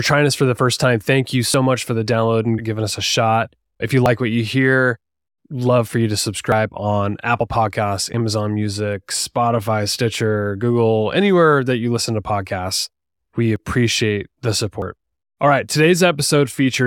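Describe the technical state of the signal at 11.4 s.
At 11.4 s the speech signal is intact, with no audible fault at that moment.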